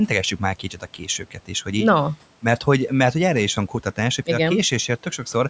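Speech cut by the noise suppressor, from 0.59 to 1.5 s and again from 3.56 to 3.98 s. The suppressor misjudged stretches of speech as background and pulled them down along with it, by about 12 dB at worst in the first span, just before "hogy így no mert", and about 11 dB in the second, between "mert hogy erre is" and "hogy a". Roughly 0.4 s of speech is affected in the first span and a brief moment in the second. Those parts sound swallowed and faint.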